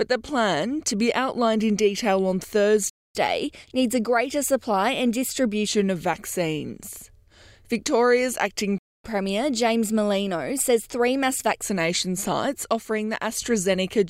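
A playback stall at 2.90 s cuts the sound off mid-flow, leaving about 0.25 s of silence until 3.15 s, when it resumes. The likely cause is the player running short of buffered data or having its output thread blocked. A catch-up at higher speed follows from 3.15 to 5.68 s: the player works through its backlog at 1.1 times normal speed, so the sound runs quicker and sits roughly a semitone and a half sharp before settling back to normal pitch and pace.

The same pair recurs. A second playback stall silences the sound from 8.78 to 9.04 s, again about 0.26 s. A second catch-up at higher speed then runs from 9.04 to 11.62 s, again hurried at 1.1 times speed and raised by about a semitone and a half as the lost time is won back, before dropping back to normal.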